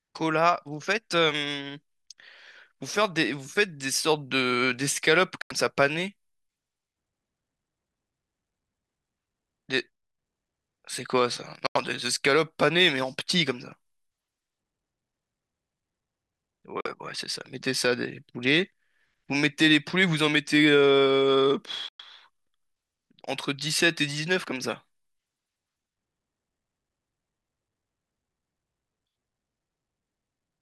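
Speech drops to silence at 5.42–5.52 s, 11.67–11.77 s, 16.81–16.87 s and 21.89–22.01 s, with gaps of roughly 40 to 110 ms. The likely cause is Bluetooth dropout: late packets were discarded, and speech resumes further on as though it had kept playing.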